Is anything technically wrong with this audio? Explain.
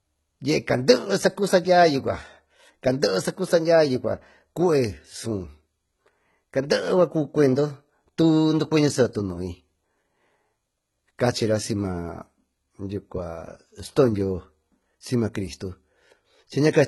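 Yes. Low-bitrate audio saved at a high bitrate runs throughout: the speech has nothing above 11.8 kHz, likely left from an earlier very low-bitrate encode, around 16 kbit/s HE-AAC, later saved as high-bitrate MP3. The re-encode cannot restore the missing top, so the artefacts of the first encoding remain.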